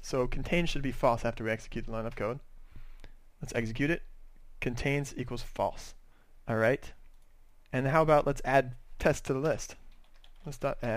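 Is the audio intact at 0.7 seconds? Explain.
No. A phantom power thump runs from 0.65 to 0.95 s. A supply switching on a live input sends a voltage step through the coupling capacitors. The result is a deep low thump peaking at about -29 dBFS and dying away over roughly 65 ms.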